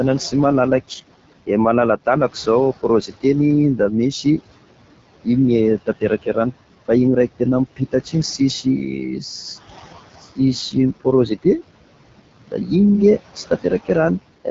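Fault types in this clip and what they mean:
Noise suppressor artifacts, throughout: a suppressor judges which frequency bands hold steady noise and turns them down frame by frame. The room noise, about 16 dB below the speech, sinks by about 18 dB in pauses and swells back under each phrase, so the background pumps.
AMR wideband (HD Voice) codec, throughout: speech is rebuilt from a pulse-excited vocal tract model up to 6.4 kHz, with shaped noise above, and nothing reaches past 7.6 kHz. The plainly rough, raspy texture fits the low 8.85 kbit/s mode.
Speech cut by the noise suppressor, at 3.07–3.24 s before "da misy", 5.78–6.36 s before "rano fa igny", 7.76–8.14 s and 12.47–12.71 s: the suppressor mistook quiet speech for noise, dropping brief stretches by about 14 to 16 dB, so sounds are swallowed.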